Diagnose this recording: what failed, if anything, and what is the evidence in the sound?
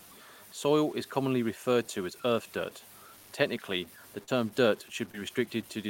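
The speech carries a grainy, gritty distortion from start to finish. It rides on the signal itself and changes with every syllable rather than sitting underneath as a steady hiss. The error is roughly 25 dB below the speech, which is high enough to roughen every quiet passage. This points to low bit depth without dither, most likely introduced at a sample-format conversion that truncated the audio to about 7 bits, leaving quantisation error locked to the waveform.

Two short concealed packet losses sit in the network and decoder path. The first, right after "earth dirt technically the", runs from 4.23 to 4.29 s. About 40 ms of audio went missing, and the receiver extended the preceding sound to bridge it, which is heard as a brief smear before the real signal blends back in. The second, from 5.11 to 5.15 s, covers about 20 ms and gives a shorter wobble of the same kind.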